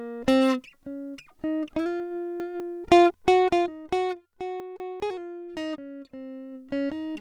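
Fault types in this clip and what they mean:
Chunks out of order: 200 ms bits of music play late, two slots behind at 2.0–2.6 s and one behind at 4.6–5.0 s, so you hear jumbled joins.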